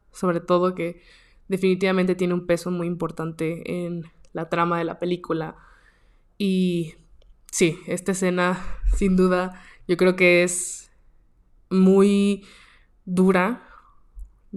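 Listening through the speech from beginning to end, nothing stood out as a technical fault at any point.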